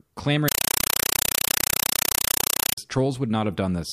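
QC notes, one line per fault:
0.48–2.78 s, compressed stream played as audio. The speech is replaced by loud, chattering static. A Dolby Digital stream was output as raw samples, undecoded. Each frame sounds as a 5.33 ms noise burst, then silence, 31.25 times a second, fitting a 256 kbps AC-3 stream.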